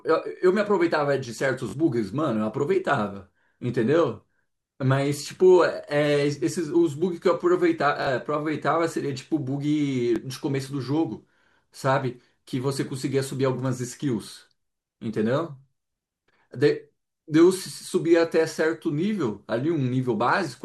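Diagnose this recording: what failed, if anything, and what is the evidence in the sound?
Bluetooth stutter on the wireless link. At 1.69 to 1.73 s and again at 8.02 to 8.07 s the speech catches into a brief buzzy repeat about 43 ms long, which fits two lost packets of roughly 21 ms each. At 10.16 to 10.18 s a single 21 ms repeat suggests one packet. The receiver replays its last buffer until data returns, then jumps ahead, so a slice of speech goes missing. A plain dropout would leave silence instead of a repeat.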